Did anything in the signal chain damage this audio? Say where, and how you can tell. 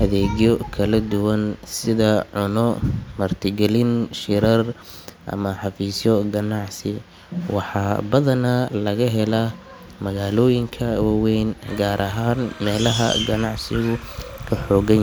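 Yes, timecode bleed in the analogue wiring: from 11.68 s to the end, a chirpy warble around 1 and 2 kHz sits roughly 25 dB under the speech, as LTC leaks from a neighbouring cable.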